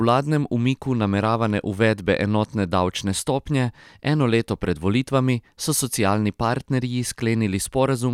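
Nothing in this bit of speech stands out as a technical problem; there's nothing to flag.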